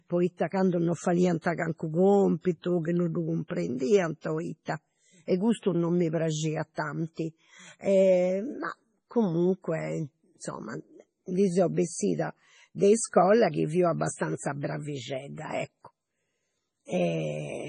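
Throughout the speech, treble stops dead at 10.5 kHz and faint detail flickers in and out, sounding watery and swirly with smeared attacks. The cause is likely heavy MP3 compression, consistent with a 24 kbps bitrate; a spectrogram shows a flat ceiling above blinking, patchy holes.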